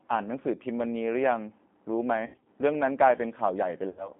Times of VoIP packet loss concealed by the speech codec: 2.26-2.45, 3.89-4.11

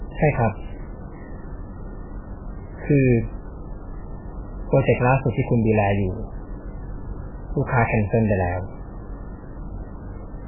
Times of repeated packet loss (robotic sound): none

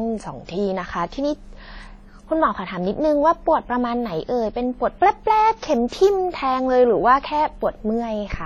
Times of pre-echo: 5.88-5.92

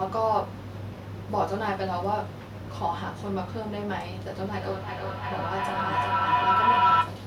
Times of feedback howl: 4.52-7.27

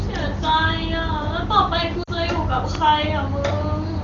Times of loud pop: 2.75-2.77

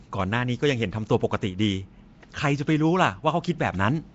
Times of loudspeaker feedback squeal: none

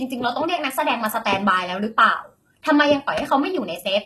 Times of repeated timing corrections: none

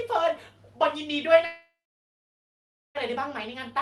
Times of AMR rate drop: none

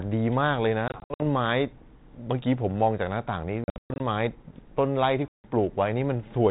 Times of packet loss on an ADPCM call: 0.88-1.23, 3.64-4.01, 5.28-5.47

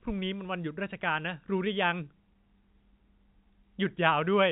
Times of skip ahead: none

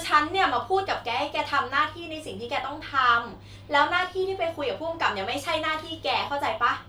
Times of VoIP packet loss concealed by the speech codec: none

